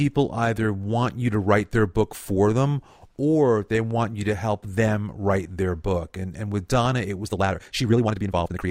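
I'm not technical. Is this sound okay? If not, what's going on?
No. From 7.21 s to the end, the speech has a time-stretched section: software likely squeezed that last stretch to fit a shorter length, running it at twice the speed while keeping the pitch by dropping tiny slices of sound. The voice doesn't turn squeaky, but the pace suddenly doubles, so the final moments come across as rushed.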